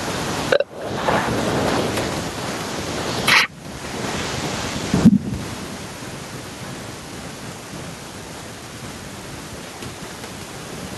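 It's a speech recording with gain pumping running right through it. The room noise sits about 36 dB under the voice, and the gain swings by something like 15 dB. The likely cause is input gain cranked way too high with a fast limiter or compressor clamping each peak. That leaves the level squashed, with loud and quiet passages pulled close together.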